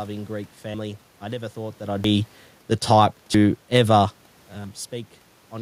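Sudden skips forward cut into this speech at 0.74 s (just before "I never thought that"), 2.04 s (after "never thought that I'd"), 3.34 s (after "the type") and 4.64 s, each losing about a tenth of a second, likely dropped buffers (overruns) recurring every 1.3 s.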